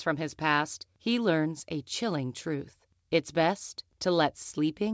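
No technical faults can be heard in this speech recording. It has passed through a WebRTC call path, and the absence of anything above 8 kHz fits a wideband codec such as G.722.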